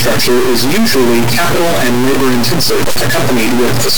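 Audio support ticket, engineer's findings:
Stuck bit, throughout: harsh buzz on speech, loud noise filling pauses. Waveform steps of roughly -5 dBFS flipping with sign; spectrogram shows broadband smear. Likely a failed high-order converter line.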